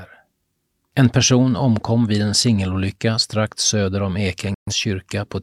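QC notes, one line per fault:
4.54–4.73 s, digital broadcast dropout: the receiver stopped getting decodable frames just after "singelolycka strax söder om" and muted its output. The speech drops out over about 3 ms, almost a hard cut, and the line stays silent until valid frames return at 4.73 s. About 128 ms of the transmitted speech never reaches the listener, a loss that fits roughly three consecutive bad frames. The talker resumes mid-stream rather than where they left off.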